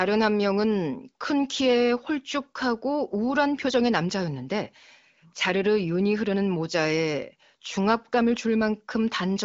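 No technical faults can be heard in the speech. It has the band-limited sound of the AMR wideband (HD Voice) codec, with nothing above roughly 7.3 kHz and at most faint coding roughness, which fits one of the codec's higher rates.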